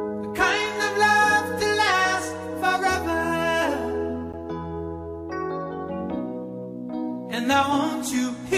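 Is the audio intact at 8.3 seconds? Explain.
Yes, the audio at 8.3 seconds is intact, with no audible fault at that moment.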